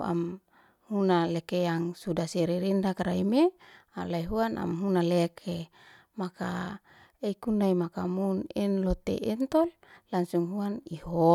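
No technical faults are audible anywhere in the speech recording.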